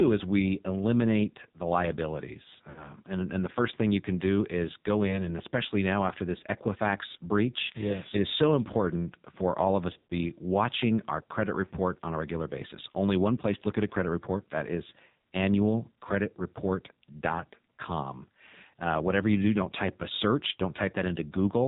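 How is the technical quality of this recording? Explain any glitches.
The technical quality is poor. The speech carries heavy mobile-codec damage throughout, with three short dropouts where the signal stumbles.

Throughout, the speech sounds buzzy, thin and synthetic, with nothing above 4 kHz. This is AMR narrowband mobile codec damage. The codec rebuilds speech from a vocal-tract model driven by sparse pulses, and at this coarseness, pointing to a low mode around 5.9 kbps, the rebuilt speech loses naturalness.

Lost AMR speech frames cause brief glitches at 2.70–2.90 s, 5.08–5.34 s and 9.94–10.14 s. When frames fail, the decoder repeats its last pitch and vocal-tract settings at falling gain. The first event, about 60 ms, smears and dips. The second is a single quick warble. The third is the longest, a 120 ms run within a scattered 160 ms stretch, and it draws out and fades before the speech returns rough.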